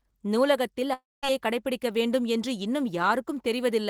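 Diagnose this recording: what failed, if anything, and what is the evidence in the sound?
Long network dropout, 0.93 to 1.25 s: the speech decays into a fading buzz or hiss, then silence, and resumes with about 300 ms missing, likely from lost network packets.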